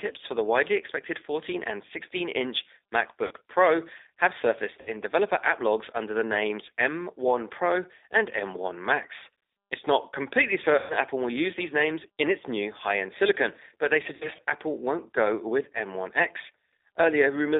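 Throughout, the speech carries the G.729 codec's signature: the line is confined to roughly 300 Hz to 3.7 kHz, and at 8 kbit/s each 10 ms frame is rebuilt from a vocal-tract filter, a pitch predictor and a few pulses. The result is plainly rough and synthetic. Unlike a simple low-pass or a waveform codec, the speech is rebuilt from a model, so it sounds synthetic rather than merely muffled.

VoIP packet loss concealed by the speech codec then breaks in four times. At 3.27 to 3.32 s about 40 ms is lost. At 4.81 to 4.90 s, after "have surfaced" and before "developer app logs under", 60 ms goes. At 10.78 to 10.94 s, after "not completely", 120 ms is lost. At 14.15 to 14.41 s, after "end silicon but they", 100 ms is lost in scattered bursts, the longest 60 ms. Each gap fits runs of 20 ms packets. Rather than silence or clicks, the decoder stretches the last pitch and filter into a buzzy tone or coloured noise that fades, and the voice stays weak briefly after packets return.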